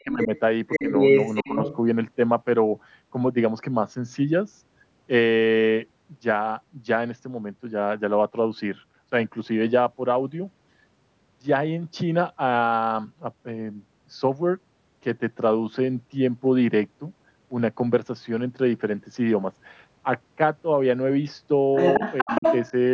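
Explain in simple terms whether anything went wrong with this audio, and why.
A second voice, the other side's voice leaking through, can be heard from 0.0 to 0.4 s, 0.71 to 1.76 s and 21.76 to 22.71 s. It is a little quieter than the main talker, then louder, then about equal. The likely cause is an echo canceller that missed part of the loudspeaker sound.

Where the two voices overlap, the main talker's speech is suppressed in double talk. It dips at 0.04 to 0.31 s and briefly at 1.43 to 1.55 s. At 22.22 to 22.43 s it nearly vanishes. The canceller likely turned everything down at once.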